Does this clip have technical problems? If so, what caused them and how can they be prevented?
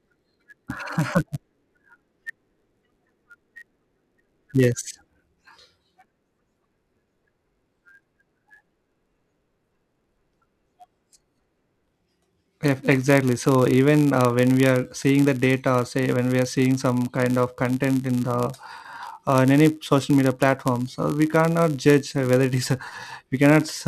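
Yes: a block size mismatch (padded) runs throughout the speech. Short blocks are zero-padded, causing a 99.6 Hz buzz, vertical stripes on a spectrogram and regular dropouts in the waveform, with playback at 0.996× speed. Prevent it by matching block sizes between processing stages.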